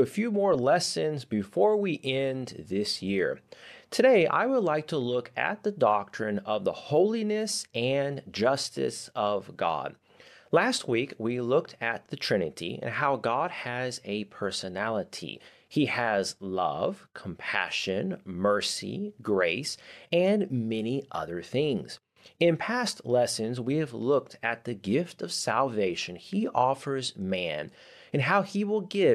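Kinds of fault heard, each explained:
No technical faults can be heard anywhere in this speech recording. There is nothing to list for any kind of fault.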